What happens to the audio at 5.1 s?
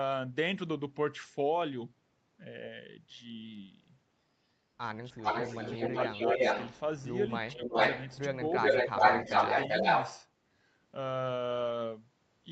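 Speech suppressed in double talk hits from 5.11 to 5.34 s: the voice dips sharply, by roughly 20 dB at its deepest, for about a fifth of a second. The likely cause is an echo canceller that couldn't tell its own talker from loudspeaker echo while both sides spoke, so it turned everything down.

An echo leak follows from 5.17 to 7.08 s: a delayed copy of the speech, trailing the original by 365 ms and roughly as loud as it, comes back. This likely happens because a speakerphone's canceller left part of what its microphone picked up.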